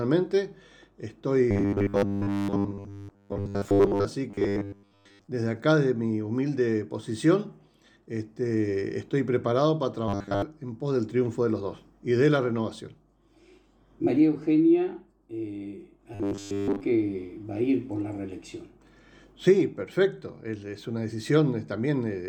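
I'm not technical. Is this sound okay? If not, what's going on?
No. Robotic sound from repeated short buffers: audio likely arrived too slowly, so tiny 10 ms slices were replayed over and over, giving a stiff, metallic 100 Hz buzz from 1.51 to 4.05 s, 4.30 to 5.27 s, 10.08 to 10.42 s and 16.15 to 16.81 s.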